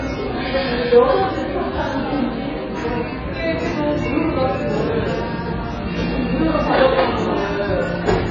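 AAC compression damage runs through the whole clip of sounds, from start to finish. Nothing reaches above about 7.2 kHz, so the top end sounds dull and closed in, and the heavy smearing and watery, warbling texture suggest a very low bitrate, on the order of 12 kbps. This is likely AAC-LC encoding: short of bits, the encoder lowers its cut-off and quantises what remains so coarsely that bands thin out or fill with substitute noise.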